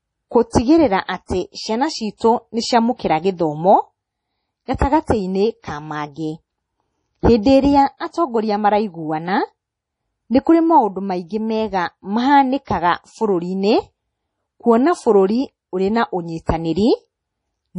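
From the start and through the whole speech clip, everything above 10.5 kHz is missing, and the sound is watery and swirly, with metallic chirps on s sounds. This is heavy damage, most likely MP3 compression at a rate that points to about 32 kbps. A plain low-pass filter would dull the treble without that shimmering.

At 0.50 to 0.53 s, a short hiss runs for 32 ms ahead of a sharp onset, which sounds softened. This is pre-echo: noise sized for the loud attack spread across its whole block. Unlike a click or reverb, it comes before the attack, never after it.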